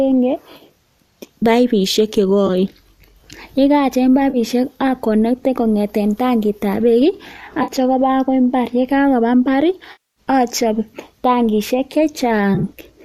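AAC frame loss with concealment occurs at 0.57, 2.47, 4.30, 7.63, 9.92 and 12.55 s. Each time, stretches of the stream went missing and the decoder covered the gap by reusing the last good spectrum. The short gaps of 20 to 50 ms leave brief smeared, noisy patches. The 240 ms gap at 9.92 s decays toward silence and fades back in. The last event is a scatter over 80 ms, with no run much longer than 20 ms. The 10 ms losses point to the likely low-delay AAC stream.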